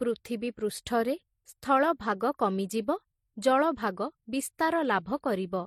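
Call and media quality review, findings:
Transcoding between lossy codecs throughout the speech. Two artefact signatures coexist: MP3-type smearing and pre-echo plus HE-AAC-type synthetic, metallic highs. Nothing above 18.3 kHz. A single encode would show one signature only. Likely MP3 into HE-AAC, consistent with around 40 kbit/s each.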